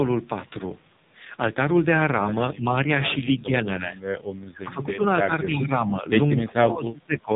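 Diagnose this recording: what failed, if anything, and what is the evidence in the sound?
At the codec stage, the whole recording carries the AMR narrowband mobile codec. Nothing reaches above about 3.8 kHz, and the speech has a buzzy, synthetic edge with heavy coding damage. That points to one of AMR-NB's low-rate modes, around 5.9 kbps, where too few pulses per subframe drive the vocal-tract model. A plain low-pass filter or a wideband codec would cut the top but leave the voice natural, without this buzz.

At the call-processing stage, the level sinks in three places, most likely from speech suppressed in double talk. From 3.39 to 3.6 s there is a shallow dip of a few decibels. From 5.25 to 6.06 s the dip is about 10 dB, and from 6.41 to 7.3 s it runs much deeper, at about 25 dB. Each time, the echo canceller seems to have mistaken the near talker for echo and pulled the signal down. 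Packet loss would instead leave abrupt gaps or repeats lasting one frame. Here the level dips and recovers over longer stretches of hundreds of milliseconds, which fits a suppressor clamping down.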